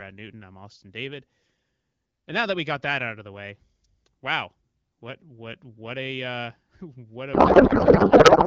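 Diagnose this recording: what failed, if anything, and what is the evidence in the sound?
A codec payload misread runs from 7.33 s to the end of the speech clip at 8.47 s. The speech dissolves into garbled noise and warble that barely tracks it, which points to an AMR packing mismatch at the codec stage, with octet-aligned frames being read as bandwidth-efficient. Every field lands in the wrong bit position, so the decoder rebuilds nonsense parameters from frames that still look valid. Before 7.33 s the AMR-WB stream decodes cleanly at 12.65 kbit/s.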